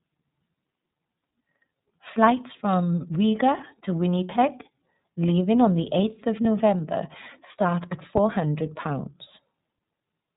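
iLBC codec coding runs through the whole speech clip. This narrowband VoIP codec codes each frame's excitation independently, and here the band stops at 4 kHz, so the voice sounds dull and lacks air and sibilant detail. The damage is plainly audible as a slightly rough, synthetic edge on every syllable. The coarseness and frame timing fit the 13.33 kbps mode with 30 ms frames.

Lost iLBC frames occur from 6.42 to 6.45 s, a gap that fits a single missing 30 ms frame. The decoder covered the hole by repeating the last pitch cycle with added noise, so the voice briefly turns into a held, faintly buzzy vowel instead of moving on. Because each iLBC frame stands alone, the speech recovers cleanly on the very next frame with no lingering smear.

A phantom power thump follows just after "start at", spanning 8.17 to 8.52 s. A supply was switched on or off on a live input, and the sudden voltage step passed through the coupling capacitors as a low-frequency pulse. 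It is heard as a deep, dull thud, decaying over roughly 77 ms before the remaining tail dies away within the marked span.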